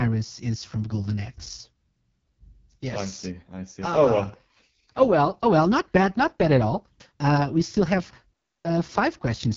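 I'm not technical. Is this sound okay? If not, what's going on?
No. The whole clip went through the AMR wideband (HD Voice) codec at a very low setting, so the speech sounds rough and raspy throughout.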